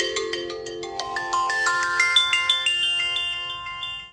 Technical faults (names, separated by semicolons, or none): none